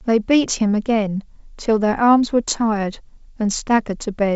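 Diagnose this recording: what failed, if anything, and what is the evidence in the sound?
Nothing failed; the G.722 wideband coding sounds as expected.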